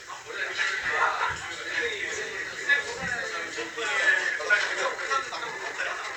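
A clip of sounds. From 4.27 s to the end, software likely time-stretched it to 1.57 times speed, so the pace abruptly turns rushed while pitch stays unchanged.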